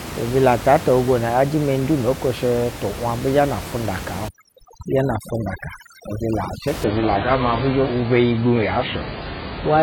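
Overdone noise removal runs from 4.28 to 6.68 s. The noise reducer here is pushed far too hard. It treats any frequency band sitting close to its noise estimate as unwanted and pulls it down almost to nothing, so the room noise, which is about 11 dB below the speech, collapses into near silence scattered with twinkling specks. The quieter components of the speech fall below the same threshold and are cut along with it.

An adaptive stream at a lower bitrate takes over at 6.84 s and lasts to the end of the clip. The player switches abruptly to a much leaner encoding without any gap. Nothing survives above 5 kHz, so the treble is simply gone, and codec artefacts rise in the remaining sound. This fits a drop from an AAC stream around 96 kbit/s to one near 12 kbit/s while the connection slowed.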